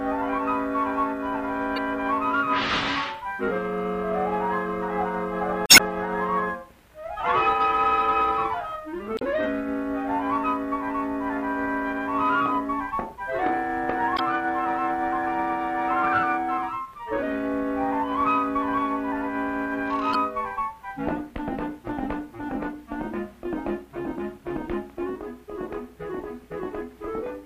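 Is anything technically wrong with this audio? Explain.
Yes. Damaged data in a compressed stream breaks up the audio five times: at 1.76–1.78 s, 5.66–5.82 s, 9.16–9.22 s, 14.15–14.20 s and 20.11–20.15 s. At each point, corrupted bytes in the encoded stream leave the decoder unable to read those frames correctly. It loses sync and hunts for the next valid frame header. The result is a brief chirp, squawk, click or short hole, the longest lasting about 0.16 s near 5.7 s.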